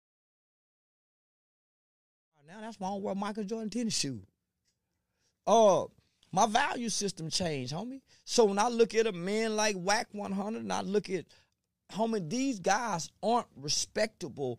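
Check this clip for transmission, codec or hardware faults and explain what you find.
No transmission, codec or hardware faults turn up in this speech recording; the only level change is a smooth editorial fade-in that begins around two and a half seconds and reaches full level at 3.09 s, with no click or hard edge.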